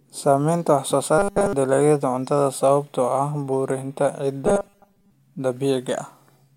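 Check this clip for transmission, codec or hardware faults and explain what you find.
The clip has two stretches of robotic sound from repeated short buffers. Audio likely arrived too slowly, so playback filled the gaps by looping a fragment of about 5 ms and skipping the real signal. From 1.19 to 1.53 s, after "wax soo", the whole stretch is repeated, and from 4.47 to 5.11 s, after "cuntada sababtoo ah burburinta", most of it is. Both turn the speech into a rigid, metallic 200 Hz buzz.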